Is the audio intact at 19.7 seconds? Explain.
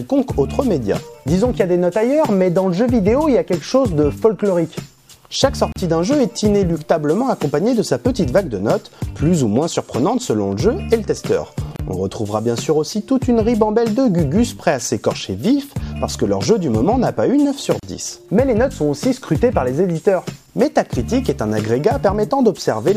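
Yes, at 19.7 seconds the audio plays through intact, with no dropout, click, distortion or other fault at that moment.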